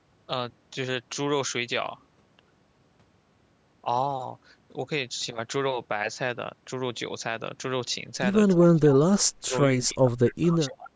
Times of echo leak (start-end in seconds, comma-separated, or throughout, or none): 10.27-10.33